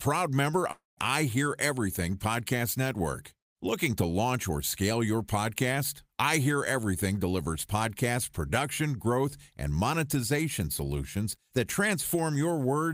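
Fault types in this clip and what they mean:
Long network dropout: from 0.71 to 0.99 s the speech gives way to a fading continuation of the last sound, heard as a buzz or hiss, lasting about 256 ms, about 160 ms of which is silence once it dies away. The likely cause is a stretch of audio that never reached the receiver, which papered over the gap by extending what it last had. When the speech resumes, roughly 260 ms of it is simply missing.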